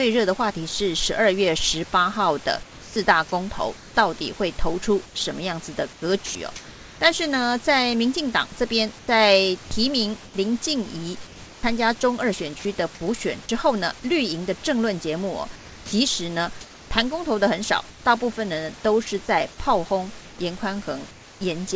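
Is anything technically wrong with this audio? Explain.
Yes, the voice detector is interfering with this speech in a few spots, on top of an 8 kHz top end from the call codec and some room noise.

From 2.63 to 6.35 s and again from 8.99 to 12.65 s there's sound chopped by the voice detector. It likely flipped between sending and not sending, so about 0.78 s and 0.66 s of speech became comfort noise.

At 15.56 to 15.92 s, sound dropped by the voice detector: the detector likely mistook quiet speech for background. About 150 ms of speech vanishes under steady synthetic noise.

Comfort noise in place of the background appears at 17.90 to 18.05 s and 21.11 to 21.41 s. The sender likely paused transmission, and the receiver's smooth fill sits about 3 dB quieter than the real room.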